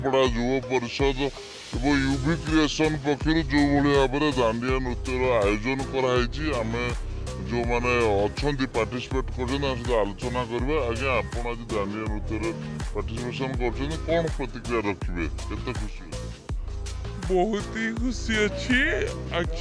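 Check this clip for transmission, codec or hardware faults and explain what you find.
One fault runs through the whole clip: a wrong sample rate. From start to finish the audio sounds slowed and sunk, everything dragged out to about 0.69 times its proper speed and lowered by roughly 6.5 semitones, with tempo and pitch falling together. That coupling points to samples being replayed slower than they were captured, with no rate conversion. The 0.69 ratio fits audio recorded at 32 kHz but played back at 22 kHz.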